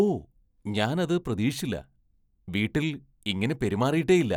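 No technical faults can be heard anywhere in this speech recording.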